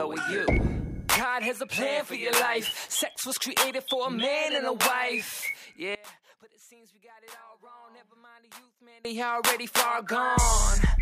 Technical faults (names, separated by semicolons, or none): one channel inverted